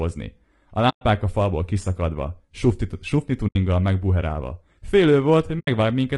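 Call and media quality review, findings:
Speech rough and grainy throughout, noise between harmonics, synthetic-sounding top band. Likely low-delay AAC compression (AAC-ELD), short frames, consistent with about 32 kbps.

AAC frame loss with muting at 0.89–1.02 s, before "a falból kiszakadva sufni"; 3.47–3.56 s, after "a falból kiszakadva sufni"; and 5.59–5.68 s. Soft fade-out and fade-in holes. Decoder zeroed lost frames.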